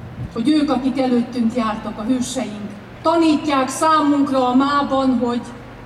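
From the first moment to the last, a steady low tone at 60 Hz sits under the sound: mains hum, roughly 25 dB below the signal. A ground loop or a nearby transformer has let the power line's alternating current leak into the signal path. What separates it from handling noise or low-frequency rumble is its fixed pitch and unchanging level. It does not drift, thump or fluctuate, and it stays put whatever the sound above it does.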